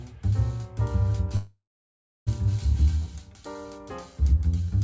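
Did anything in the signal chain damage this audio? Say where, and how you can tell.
Yes: call audio freeze at 1.36–2.29 s, likely network delay draining the jitter buffer. The last sound fades out, leaving 0.66 s of silence, then resumes with nothing lost.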